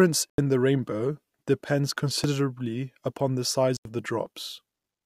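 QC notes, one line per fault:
0.30–0.38 s: corrupt frame muted. The sound cuts abruptly to silence for about 80 ms, just before "the rainbow depends". This is the decoder rejecting a damaged compressed frame, most likely a single one, with the player substituting silence. Timing is preserved.
3.77–3.85 s: corrupt frame muted. Just after "the size" there is another abrupt silent gap of about 86 ms, pointing to a short run of rejected frames replaced with silence. What follows resumes on time with no drift.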